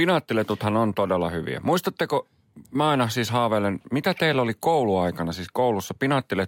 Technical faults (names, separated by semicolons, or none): none